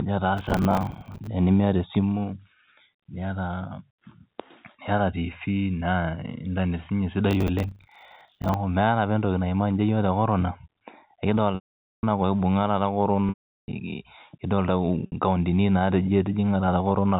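From 0.37 to 1.27 s and 7.31 to 8.54 s, processor overload crackle: dozens of roughly 10 ms buffers missed their deadlines and replayed old audio, causing gritty tearing. Packet loss with pitch repetition at 11.55 s (480 ms), 13.29 s (390 ms) and 15.06 s (60 ms): the repeated pitch period buzzes briefly, and the longer gaps fade to silence before a cross-fade back.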